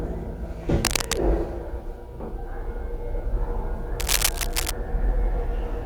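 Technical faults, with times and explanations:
0.85–1.21 s and 3.99–4.71 s, cable scratch noise: dense, uneven crackling bursts about as loud as the sound itself, likely from a worn cable or connector being moved. On a spectrogram these appear as ragged broadband smears; the waveform shows jagged, irregular spikes.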